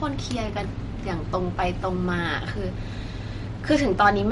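Throughout the speech, nothing is heard above 11.1 kHz, and the remaining sound has a plainly audible watery, swirling quality, with metallic chirps on s sounds and softened attacks. This is most likely MP3 compression at a low bitrate, around 48 kbps by the sound of it. Short of bits, the encoder cut the treble and dropped weak frequency lines that flicker between frames. A simple low-pass filter would dull the top without this shifting, chirpy texture.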